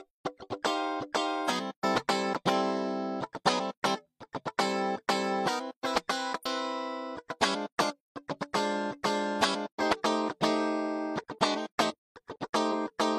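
A brief glitch breaks through at 1.44 to 1.50 s and again at 6.41 to 6.46 s, each about 50 ms long. Both are damaged data in a compressed stream: corrupted bytes make the decoder misread frames and lose sync until the next valid frame header.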